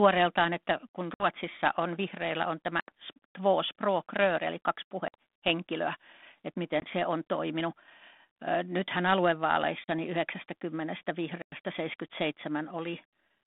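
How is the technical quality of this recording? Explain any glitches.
The speech breaks up six times with abrupt silent holes, each followed by briefly distorted speech, against narrow telephone-band audio of about 200 Hz to 3.6 kHz with light coding grain, which points to 32 kbit/s G.726 ADPCM.

Packet loss on an ADPCM call: hard-edged dropouts at 1.14 s (60 ms), 2.8 s (80 ms), 5.08 s (60 ms), 6.8 s (20 ms), 9.84 s (40 ms) and 11.42 s (100 ms). The speech resumes slightly distorted and settles within tens of milliseconds. A few lost packets were filled with silence, leaving the decoder's predictor and step size out of step with the sender's until they re-converged.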